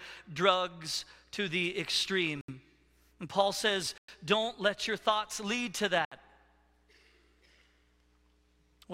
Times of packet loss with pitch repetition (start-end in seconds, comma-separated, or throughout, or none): none